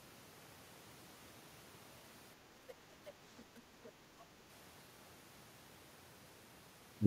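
At 3.06 to 3.11 s, a brief scrap of a second voice cuts in. It returns at 3.39 to 3.44 s and again at 3.83 to 3.92 s. This is the other side's voice leaking through. Each burst sits roughly level with the main talker, or slightly above. The bursts are short. The likely cause is the far end playing on a loudspeaker, with the echo canceller leaving part of it in the microphone signal.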